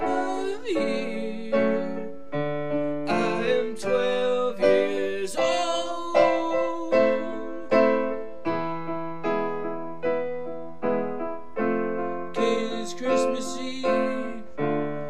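The audio carries a DC offset from start to finish. The whole waveform sits shifted off zero by a constant, about -34 dBFS. You cannot hear it directly. It eats into headroom and leaves steady energy at the very bottom of the spectrum.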